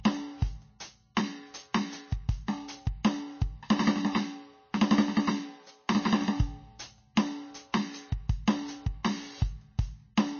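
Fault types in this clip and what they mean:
MP3 compression: The music has nothing above 6.5 kHz, and the codec damage is plainly audible. Weak frequency lines switch on and off between frames, giving a watery, swirling texture. This is likely MP3 coding short of bits, which fits a bitrate near 27 kbps.
pre-echo: Two attacks, at 1.15 s and 7.15 s, each have a brief hiss of about 20 ms just before them. The codec spreads its noise over a whole block. Noise meant for the loud attack leaks into the quiet moment before it.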